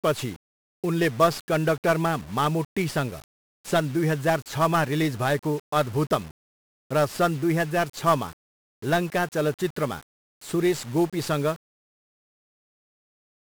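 Throughout, the speech carries heavy 1-bit DFPWM compression. Each sample is a single up-or-down nudge to an adaptive level, which fits a 48 kbps stream. It sounds fuzzy and crackly, with the treble drowned in hiss. A spectrogram shows broadband noise filling the upper bands, and the waveform looks grainy.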